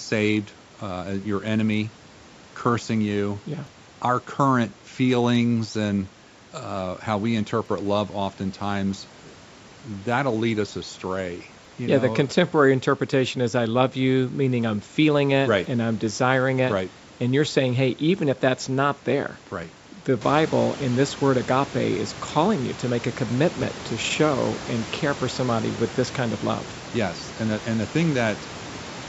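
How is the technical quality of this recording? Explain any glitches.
The recording has one recurring glitch: audio missing between chunks, at 3.67, 7.66, 11.65, 15.65, 19.64, 23.63 and 27.62 s. The capture chain likely works in 4-second chunks and drops a few milliseconds at each handover, then splices the two ends together with no gap. This produces a skip every 4 s. It falls between "and uh how we" and "love oftentimes", just after "if that's not there", and between "you to make a" and "to show and care". The room noise rises by about 11 dB near 20 s but stays about 17 dB below the speech, and the call processing leaves nothing above 8 kHz.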